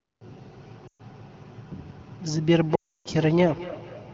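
From 0.67 s to the end, a feedback echo between two devices sets in. A second device's loudspeaker leaks into a microphone whose canceller can't remove it, so each syllable returns about every fifth of a second, thinner and ringing, peaking around 16 dB below the speech. On a spectrogram this shows as faint, evenly spaced copies trailing each burst.

Lost AMR speech frames cut in from 0.87 to 1.01 s, a 120 ms gap that fits about six 20 ms frames. The wideband decoder stretches the last good sound and quickly fades it, dropping to near silence within two frames. The waveform shows a sagging envelope, and the spectrogram shows flattened, blurred harmonics. A longer loss follows from 2.75 to 3.08 s, about 300 ms, where the sound drones briefly, drops into near silence and returns weak and rough. This appears as a gap in the waveform and a blank band on the spectrogram.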